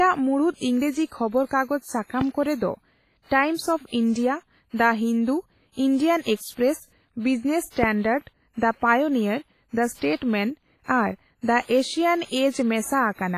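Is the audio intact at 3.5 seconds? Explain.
No. At 3.5 s, as throughout, the speech carries heavy damage, likely from WMA compression at a low bitrate near 24 kbps. Coarsely quantised transform blocks leave ringing, washy, breathing hiss. A spectrogram shows nothing above 15.3 kHz and gappy, smeared upper bands.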